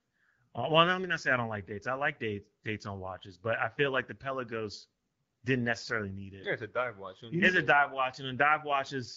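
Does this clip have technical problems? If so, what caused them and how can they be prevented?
No, nothing in this speech clip needs fixing.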